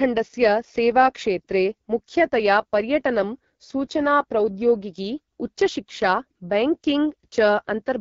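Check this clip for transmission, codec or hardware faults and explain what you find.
One codec fault runs through the whole clip. From start to finish the speech carries AMR wideband (HD Voice) codec damage. The codec models speech below 6.4 kHz with a pulse-excited vocal tract filter and synthesises 6.4 to 7 kHz as shaped noise. Here the rough, raspy texture points to one of its lowest rates, around 8.85 kbit/s, and the damage is plainly audible.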